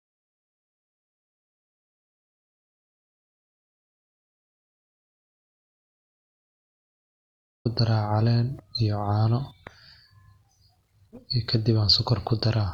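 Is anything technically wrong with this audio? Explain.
Yes. From the very start until 7.65 s there's an audio dropout to silence: dead silence with no room tone at all. Likely the input was disconnected or muted while the recorder kept writing. The speech then kicks in abruptly, mid-flow.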